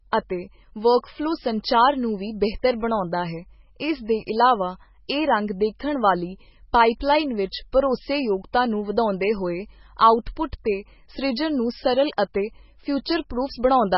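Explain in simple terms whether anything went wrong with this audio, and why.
Heavy MP3 compression, likely squeezed too hard, drops all treble above 5.6 kHz throughout the speech, so it sounds dull, watery and swirly from start to finish.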